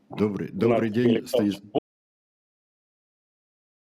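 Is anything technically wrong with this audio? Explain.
Yes. From 1.79 s to the end there's an audio dropout to silence: the sound cuts off mid-flow and leaves dead silence, with no room tone at all. The likely cause is the input dropping out, maybe a disconnected device or a stray mute, while recording carried on.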